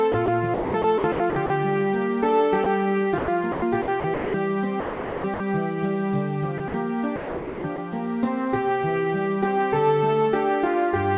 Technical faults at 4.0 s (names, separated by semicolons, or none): sound chopped by the voice detector